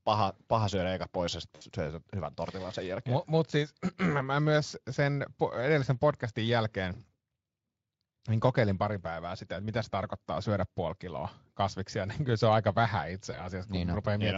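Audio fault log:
1.55–1.63 s, VoIP packet loss concealed by the speech codec: right after "syödä eikä pois ja", about 60 ms goes missing, which fits three 20 ms frames. The decoder keeps replaying its last pitch and filter at a dropping gain, so you get a short buzzy or noisy smear before "syö sen hyvän tortilan".
13.31–13.48 s, VoIP packet loss concealed by the speech codec: after "se on aika vähän", a single 20 ms gap, but the rebuilt state leaves the light Speex coding sounding weak and warped for a while after packets return.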